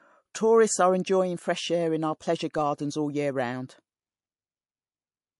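Throughout the speech the treble stops dead at 11.3 kHz and s sounds swirl and warble. This is likely MP3 compression at a bitrate near 48 kbps, zeroing weak frequency lines frame by frame. A plain low-pass filter would dull the top without that watery flicker.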